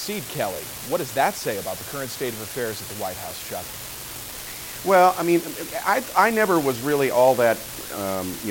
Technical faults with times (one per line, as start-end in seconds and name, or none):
0.00-8.50 unreliable data bit